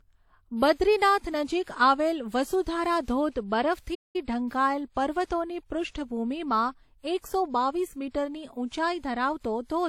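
The clip is speech, and it suffers from transcoding between lossy codecs. Two sets of coding artefacts are heard together, layered across the whole recording. The likely cause is a chain of encodes. The sound fits a first pass through WMA at about 48 kbit/s, then a second pass through HE-AAC at about 40 kbit/s. The later encoder spends its limited bits reproducing the earlier encoder's damage, then adds its own on top. The narrowest bandwidth from the chain is what remains. There is also a playback stall. The audio cuts to silence just after "નજીક આવેલ વસુધારા ધોધ", at 3.94 s. It returns at 4.16 s with "ઢંકાયેલ પર્વતોની". The gap lasts about 0.2 s. The speech halts mid-flow and then carries on. The player likely ran out of buffered data, or its thread was briefly blocked, so output stopped until it recovered.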